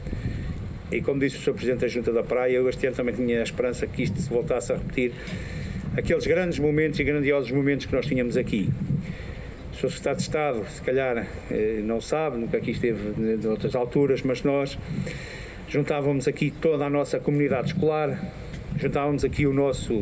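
Nothing stood out as a technical fault anywhere in the audio on listening.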